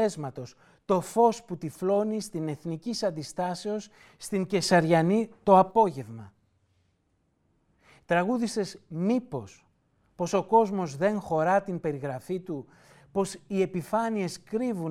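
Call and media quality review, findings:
Sudden gain jump, 4.63 to 5.71 s: speech and background noise step up together by about 6 dB, hold there, then drop back at the end. Level changes instantly, with no ramp. Likely cause: a digital gain setting or bit shift applied sample-to-sample in the capture or mixing stage, then reverted.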